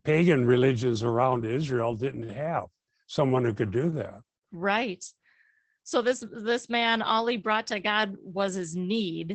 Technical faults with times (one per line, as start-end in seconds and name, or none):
0.00-9.34 Opus voice compression